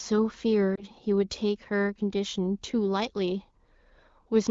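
Lost AMR speech frames at 0.75 to 0.84 s: the decoder, missing what sounds like a single 20 ms frame, reused the previous pitch and vocal tract settings at falling gain, so the speech dips and warbles briefly.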